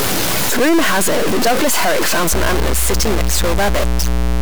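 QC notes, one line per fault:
Throughout, stuck bit: there's a harsh, buzzy grit riding on the speech, and the pauses don't go quiet but fill with a hiss-like noise. That's likely one converter or data line bit stuck high or low, so roughly half the samples get knocked off by a fixed step, here a big one at about -10 dBFS. It flips around as small values change sign, which is why the gaps get noisy and not just the loud bits.
2.30 s to the end, mains hum: a steady low 60 Hz tone comes in and sits under the speech at about 10 dB below it, with a bit of low harmonic buzz on top. It sounds like the power line leaking into the signal, typically a ground loop or a transformer sitting too close to the cabling.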